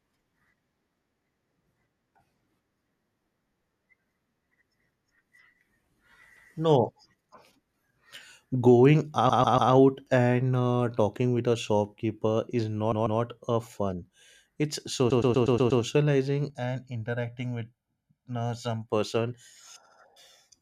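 Repeated frames stutter at 6.36 s, 9.29 s, 12.91 s, 15.10 s and 19.85 s. Compressed blocks of 144 ms, then 120 ms and 72 ms, play again, once to six times. The 9.29 s one comes before "and uh talking with", the 12.91 s one after "with a shopkeeper is", and the 15.10 s one after "a fun it's".

From 16.50 to 18.89 s, channel delay causes comb filtering. One channel lags by about 1.5 ms before the mono sum, notching near 400 Hz. The sound turns hollow.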